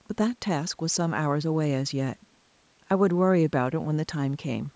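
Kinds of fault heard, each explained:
No technical faults can be heard in this speech; it has passed through a call's microphone processing, whose high-pass filter trims the lowest bass, and the signal carries nothing above 8 kHz.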